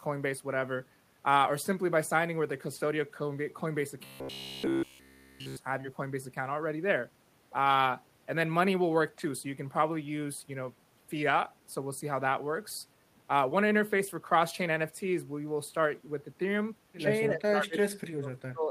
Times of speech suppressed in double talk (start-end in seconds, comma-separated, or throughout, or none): 17.30-18.70